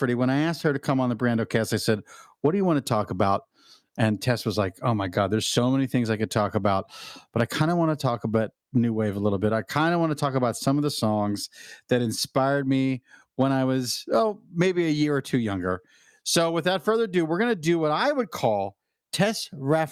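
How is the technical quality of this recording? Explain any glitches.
No glitches or technical faults can be heard anywhere.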